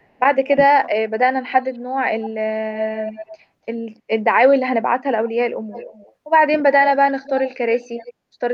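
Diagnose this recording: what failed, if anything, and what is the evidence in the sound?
Call processing: speech suppressed in double talk, at 0.02–0.16 s and 0.54–0.59 s, dips about 20 dB and 10 dB, likely the echo canceller ducking both talkers. Level dips, not dropout silence.

Call processing: echo leak at 1.51, 2.21, 2.82, 5.72, 7.23 and 7.75 s. A discrete delayed copy of the speech, 279 to 310 ms late and about 5 to 20 dB down, points to residual loudspeaker echo rather than room reverberation.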